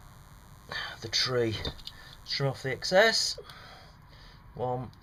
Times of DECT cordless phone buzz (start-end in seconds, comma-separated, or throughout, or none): 0.00-3.16